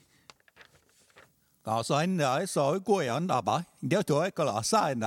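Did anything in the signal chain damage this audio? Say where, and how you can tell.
No, nothing in the signal chain damaged this audio.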